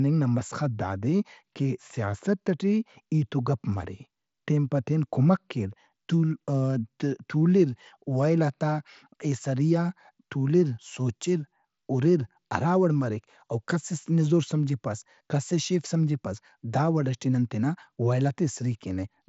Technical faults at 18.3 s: none

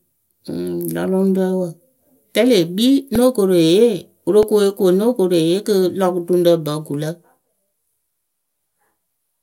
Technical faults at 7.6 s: none

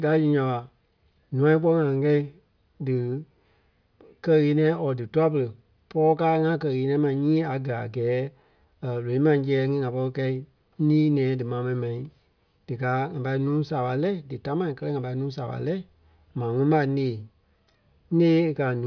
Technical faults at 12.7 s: none

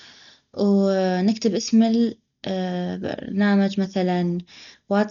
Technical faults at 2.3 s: Dolby Digital compression

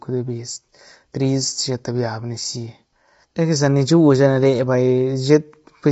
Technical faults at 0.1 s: low-delay AAC compression

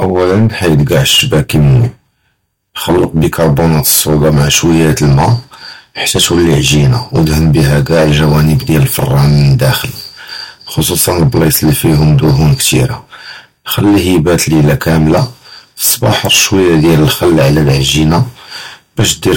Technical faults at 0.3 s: hard clipping

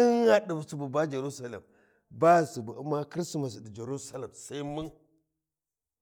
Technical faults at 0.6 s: none

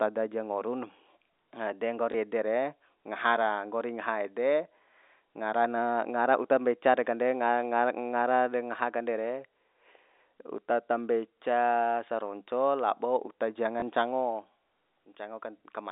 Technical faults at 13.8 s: packet loss with last packet repeated

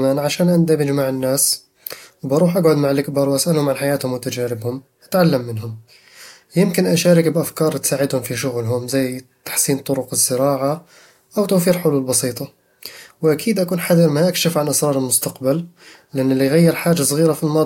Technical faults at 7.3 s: none

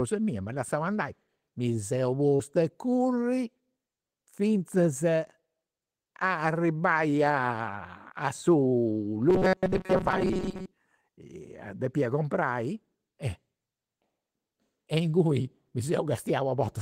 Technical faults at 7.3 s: none

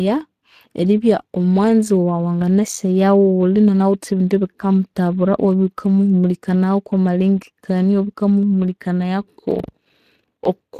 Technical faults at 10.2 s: Speex codec; buffer tearing

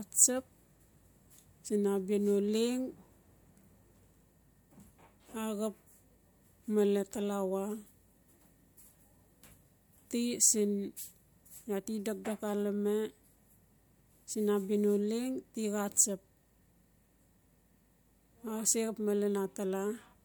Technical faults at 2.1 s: none

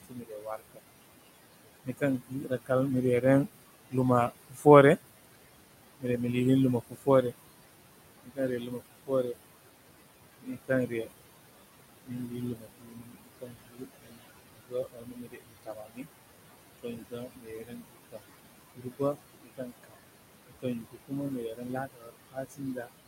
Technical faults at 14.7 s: noise suppressor artifacts; speech cut by the noise suppressor

